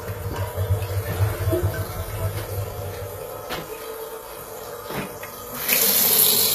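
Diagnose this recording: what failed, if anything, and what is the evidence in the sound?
The codec stage is at fault: the audio carries plainly audible damage throughout, consistent with HE-AAC compression, likely at a low bitrate around 20 kbps. The upper band sounds bright but synthetic, with a gritty, metallic sheen, because the encoder transmits only the lower spectrum and regenerates the treble by copying lower bands upward under a coarse envelope. A spectrogram would show repeated, blocky high-frequency patches misaligned with the harmonics below, and a hard ceiling with nothing above 14.9 kHz.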